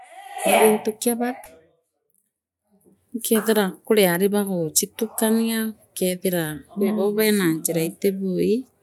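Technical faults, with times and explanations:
No technical faults heard.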